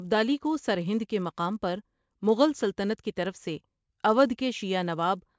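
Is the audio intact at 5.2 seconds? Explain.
No. At 5.2 seconds the speech carries the same fault heard across the whole clip: a resampler restarted on every block. Each 10 ms block was converted on its own, which fits a 24 kHz to 16 kHz conversion, so every block edge picks up a small error. The result is a buzz at 100 Hz that sounds only under the speech. On a spectrogram it appears as vertical lines every 10 ms. On the waveform, small steps sit at each block boundary.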